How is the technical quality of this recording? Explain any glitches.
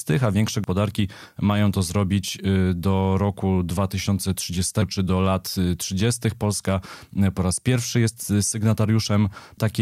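The recording has two audible glitches in the speech, each a sudden skip forward. At 0.64 s, just after "a większe", and again at 4.82 s, just before "czy do lat", there is a jump with no gap of silence. Each time roughly 150 ms of sound goes missing. The likely cause is a dropped buffer (overrun): the capture software fell behind, the hardware overwrote the unread samples, and the audio on either side was spliced together.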